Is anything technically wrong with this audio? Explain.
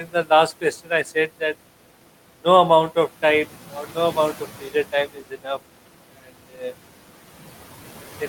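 Yes, there are two noise-suppression problems in this speech.

Noise suppressor artifacts run through the whole clip. The suppressor estimates which frequency bands hold only steady background and pulls them down, here by about 12 dB, recalculating frame by frame. The room noise, sitting about 19 dB below the speech, therefore drops away in pauses and swells back under the talking.

Speech cut by the noise suppressor occurs between 0.78 and 1.06 s. In that stretch the suppressor mistook low-level parts of the speech for noise and attenuated them along with the background, by up to about 10 dB. Altogether roughly a tenth of a second of sound is affected, in brief patches where quiet consonants or word endings sound swallowed and faint rather than cleanly articulated.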